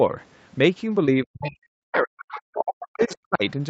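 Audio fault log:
1.05–1.09 s, short concealed packet loss: A chunk of about 20 ms of the call arrived too late for the decoder, so the receiver patched the gap by stretching what came just before it, carrying the pitch forward or filling with shaped noise, then crossfading back into the real signal. That's why you get a quick smear or tiny wobble right there rather than a clean dropout. Anything very brief in that spot could have been swallowed by the patch.
1.24–3.44 s, speech suppressed in double talk: Across roughly two seconds the talker keeps ducking, sometimes hard, with the deepest dips around 40 dB down, so parts thin out, lose their top end or break into pieces. This is likely the echo canceller panicking while both ends talked over each other. It couldn't tell the local talker from the loudspeaker echo, so it clamped down on everything. Note that the whole call path tops out at 8 kHz anyway, so the thinning sits on an already narrow signal.
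1.41–1.51 s, 2.19–2.42 s and 3.03–3.15 s, other side's voice leaking through: Three short scraps of a second voice sneak in underneath, sitting roughly 20 to 25 dB below the main speech, faint. The likely cause is the far end playing out of the talker's loudspeaker and getting picked up by the mic, with the echo canceller not scrubbing all of it. These bits overlap the suppression window above, which fits both sides talking at once.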